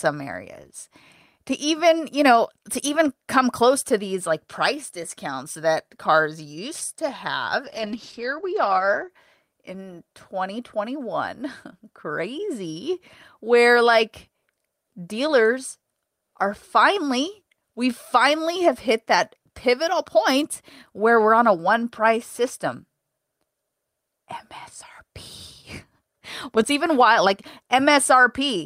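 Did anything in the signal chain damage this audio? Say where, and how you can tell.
Yes. A call bitrate drop runs from 7.66 to 9.15 s, right after "cars used to have". The network's bandwidth estimate fell, so the codec went from about 32 to 10 kbps for roughly 1.4 s. Coding turns coarse and the top end shuts at 8 kHz, leaving speech muffled and watery.

Processor overload crackle appears from 19.23 to 19.48 s, between "we finally have hit" and "pivotal point where we're". This is a driver and buffer fault. Several very short buffers, around 1.5 ms each, missed their deadlines and came out as tiny silent gaps, heard as a brief gritty tearing.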